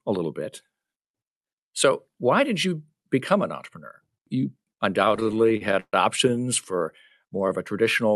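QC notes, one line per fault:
5.05–6.40 s, repeated stalls (stutter): the sound drags and catches in 23 short stalls up to roughly 130 ms before "for more". Late packets kept emptying the jitter buffer, and extending the last sound filled about a quarter of that span, with nothing lost.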